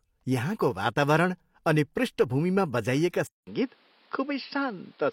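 At 3.27 s a 200 ms flat gap in the waveform, then duller speech with a new noise floor and a spectrogram ceiling at 5.5 kHz, likely an input switched to a poorer device.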